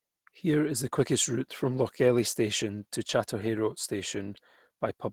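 From start to finish, the speech has passed through Opus voice compression at a low bitrate, which points to roughly 16 kbps in hybrid mode. A linear-prediction coder handles the band below 8 kHz, and a thin transform layer covers the top, and at this low rate the excitation is coded coarsely. The damage is plainly audible: the speech sounds hoarse and faintly robotic, coded in 20 ms frames.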